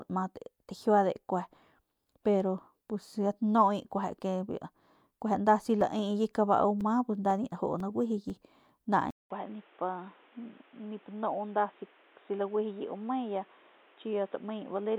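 From 5.81 to 8.30 s, periodic USB or driver dropouts punch roughly 2 ms silent gaps every 0.5 s, heard as about seven evenly spaced ticks. At 9.10 s, a 200 ms silence precedes duller, boxier sound, likely the input switched to a poorer device: nothing above 3.8 kHz, level down about 5 dB, new noise about 30 dB below.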